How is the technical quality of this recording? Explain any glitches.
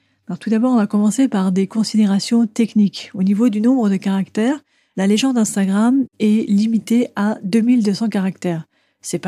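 The recording has one glitch. From 1.60 to 3.29 s there is crude rate conversion. The rate was changed by a 3:2 ratio, which fits 32 kHz to 48 kHz, using only linear interpolation. The interpolation error forms shifted, inharmonic copies of the speech, roughly 35 dB down. It sounds like a faint, gritty fizz riding on loud and bright sounds.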